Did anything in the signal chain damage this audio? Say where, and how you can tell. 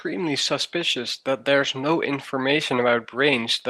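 Yes, the damage happened on the network. There are two short stretches of a lost packet rebuilt from error correction, at 1.63 to 1.65 s and at 2.77 to 2.79 s. In each, about 20 ms of the speech turns rougher and grainier, with no dropout. That length fits a single lost packet. The following packet carried a low-bitrate Opus in-band FEC copy of the missing one, and the decoder played that coarser copy in its place.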